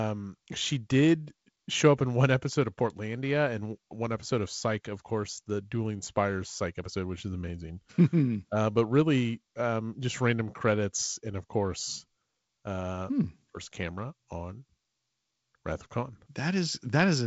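Nothing in the speech stood out as a fault on listening.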